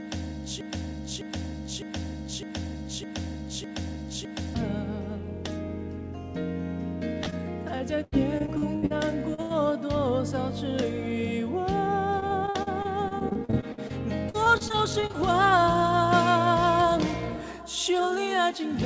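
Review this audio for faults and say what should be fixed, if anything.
A broken-record loop runs from the start to 4.55 s, already under way when the clip begins. A 0.61 s fragment repeats six times back to back, likely because the player or stream stalled and kept resending its last buffer. On the waveform, identical blocks recur every 0.61 s; on the spectrogram, the same pattern tiles across. Whatever should have played there is gone. To prevent it, detect stalls and output silence or resynchronise instead of replaying the held buffer.

Short concealed packet loss occurs at 7.24–7.28 s, 7.30–7.34 s and 9.34–9.40 s, with 20 to 40 ms missing each time. The receiver stretched the preceding sound to cover each hole, so each sounds like a brief smear or wobble. On the spectrogram, harmonics briefly freeze or turn into a noise patch. To prevent it, give the jitter buffer more headroom or add forward error correction.

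Repeated packet loss (robotic sound) spans 7.78–8.92 s (seven gaps, longest 81 ms), 12.20–13.91 s (fifteen gaps, longest 52 ms) and 14.29–15.16 s (nine gaps, longest 44 ms). About a quarter of each stretch is patched, which makes it choppy, with pieces missing. The spectrogram shows a striped, stuttering texture of frozen slivers. To prevent it, fix the unstable network path and enable redundancy or FEC.

A burst of packet loss at 9.42–9.52 s removes about 80 ms. The receiver extended the last sound and faded it, giving a held buzz or fading hiss before the audio resumes further on. The waveform shows a decaying, overly regular stretch. To prevent it, use packet redundancy and a larger adaptive jitter buffer.

Throughout, nothing appears above 8 kHz, consistent with a wideband call codec such as G.722.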